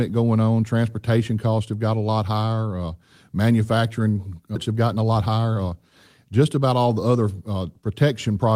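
At 4.55 to 4.57 s the speech does a skip ahead: about a second of audio was dropped while later audio was already queued, so playback jumps straight on with no gap. A waveform or spectrogram shows the two sides butted together, with an abrupt break in the harmonic pattern.

From 4.69 to 5.73 s, then from 6.33 to 6.80 s, a jitter buffer speed-up runs at 113% and 109%. Short pitch-period pieces, totalling about 150 ms and 50 ms, were cut to shed excess delay. The speech sounds hurried at unchanged pitch. On a spectrogram, syllables are compressed in time while harmonic spacing stays the same.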